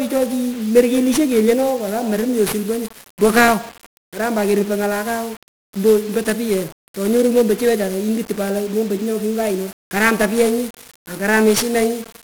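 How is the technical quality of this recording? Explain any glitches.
Poor, due to one fault present throughout. 1-bit DFPWM compression runs the whole clip: each sample is a single bit nudging an adaptive level, so heavy broadband quantisation noise makes the speech fuzzy and crackly, with dulled or hissy treble, consistent with a low-rate stream around 48 kbps.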